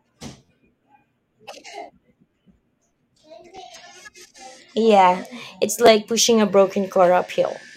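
Short stutters, each a tiny slice of the speech sounding again with a hard click at every join, interrupt the audio at 0.45 to 0.49 s, 2.31 to 2.33 s, 3.56 s and 5.86 s. This is a repeated buffer. Fresh audio arrived late, so the last piece of about 11.6 ms, which fits a 512-sample buffer, replayed three extra times, then twice, then once and once, costing roughly 40 ms of audio at worst.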